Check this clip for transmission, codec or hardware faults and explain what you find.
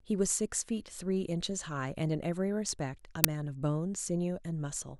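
One fault stands out in this speech recording: an uninitialised buffer at 3.24 s. It is a loud crack lasting about 5.8 ms, which fits a 256-sample buffer. It happens because the playback chain sent a block to the output before any audio had been written into it. Whatever data was left over in that memory was read out as if it were samples.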